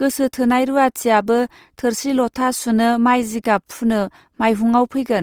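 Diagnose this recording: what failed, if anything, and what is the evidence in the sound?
The codec stage failed: throughout the speech the sound turns grainy, rough and noisy rather than swirly, while content still reaches about 20.2 kHz. That points to Opus compression, likely in its fullband CELT mode, filling bit-starved bands with noise or folded energy at a rate that fits roughly 24 kbps.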